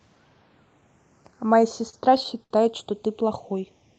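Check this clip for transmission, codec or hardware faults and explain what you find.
Two faults are audible in this speech. The call codec path itself behaves as expected, with the top end stopping near 8 kHz as a band-limited Opus stream would.

Channels drifting apart: Throughout the clip a slow flanging sweep can be heard when the channels are summed to mono. The two sides come from devices on separate clocks, roughly 70 ppm apart, so their offset creeps to under half a millisecond and the comb notches slide.

Repeated stalls (stutter): From 1.89 to 2.52 s the speech drags and stutters through five short holds, the longest 69 ms. Packets arrived late, so the jitter buffer ran dry and the receiver stretched the last sound each time. Nothing is actually lost.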